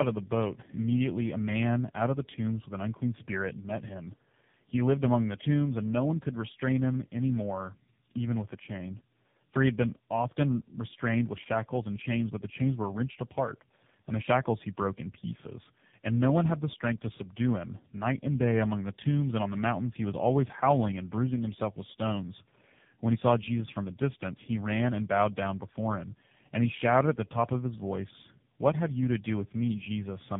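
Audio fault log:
Throughout: tandem speech coding. Three successive speech codecs each re-encode the previous one's decoded output, compounding roughness, muffling and warble. The spectrogram shows smeared formants and nothing above 3.7 kHz.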